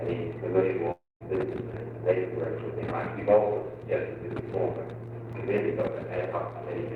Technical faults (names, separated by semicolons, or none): long network dropout; CD scratch ticks